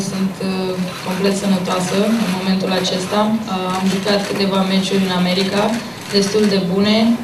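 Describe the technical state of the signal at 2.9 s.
At 2.9 s the signal is intact, with no dropout, distortion, glitch or other fault audible at that point.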